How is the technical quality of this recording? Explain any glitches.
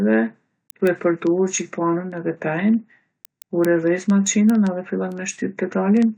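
The recording has one persistent fault. Word clock ticks run from 0.14 to 6.14 s: an unlocked digital receiver drifts a few hundred ppm, slipping one sample about every 50 ms, producing a steady rattle of sharp, uneven clicks across the speech.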